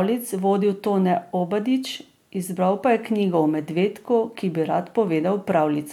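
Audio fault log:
No fault can be heard in this speech clip.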